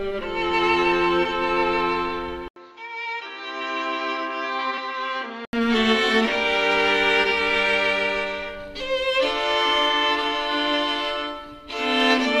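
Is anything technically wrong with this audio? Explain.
Yes, there are two faults.

From 2.48 to 5.53 s the sound turns dull, with nothing above 7.3 kHz, an 80 ms silence at the switch, a level about 5 dB lower, and new background noise roughly 40 dB below the signal. This is likely an input switched to a poorer device, whose narrower band, lower level and own noise take over until the original input returns.

At 4.78 s a 1.33 ms block of digital silence is heard as a tick. The abrupt dropout fits a 64-sample block of zeros, either from an output buffer not filled in time or from a calculation that gave invalid numbers.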